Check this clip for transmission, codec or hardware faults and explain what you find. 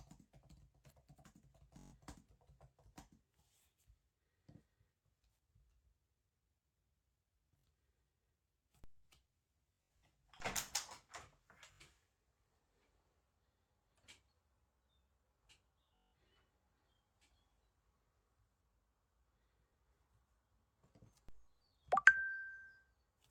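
Two faults turn up in this recording of everyday sounds: Bluetooth stutter in six places and a DC step three times.

Bluetooth stutter occurs at 1.79–1.93 s, 7.59–7.64 s, around 10.00 s (repeats scattered over about 0.3 s, the longest run 64 ms), 11.74–11.81 s, 15.96–16.13 s and 19.69–19.71 s. Packets arrived late or not at all, and the receiver looped its last buffer, which fits slices of roughly 21 ms. The result is a short buzzing stutter, and on resumption the sound skips forward by up to 171 ms. A spectrogram shows these spans as tiled, identical vertical columns. A waveform shows a repeating block pattern.

A DC step occurs at 8.84 s, 10.40 s and 21.29 s. The waveform's zero line jumps abruptly, then drifts back over roughly a tenth of a second, as a 2 Hz high-pass would pull it. Each step is heard as a dull low thump under unchanged sound. It shows as an offset baseline in the waveform and a brief low-frequency smear in the spectrogram.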